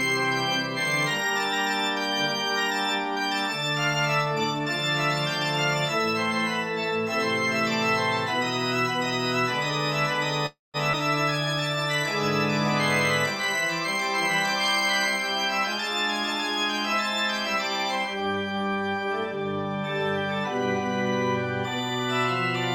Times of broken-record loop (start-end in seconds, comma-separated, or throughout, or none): none